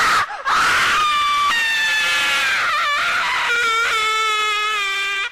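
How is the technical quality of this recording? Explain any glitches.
There's one glitch worth flagging, right near the start. At about 0.61 s you get an overlap between stream segments. Two chunks of the stream carry timestamps that overlap, so the player trims the overlapping stretch, even though that sound was never actually duplicated. Roughly 10 ms of real audio just disappears, and the waveform jumps straight across the gap. You hear it as a single short click or tiny skip, and it happens only once here.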